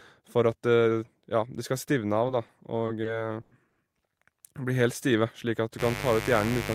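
At 2.46 s a sound is held slightly too long, with a faint buzz or dip lasting about 20 ms before the speech carries on. This is a short stall from a late packet: the jitter buffer ran dry, the last sound was stretched, and playback resumed without losing anything.

From 2.86 to 3.79 s the speech drags and stutters in four separate holds that together add about 230 ms, the longest about 100 ms, so roughly a quarter of that stretch is filler. These repeated stalls come from packets repeatedly arriving late, emptying the buffer each time.

From 5.77 s to the end a steady, raspy buzz sits on the speech, only about 10 dB below it. This is mains buzz at 50 Hz, with sharp switching spikes twice per cycle spreading harmonics up into the kilohertz range.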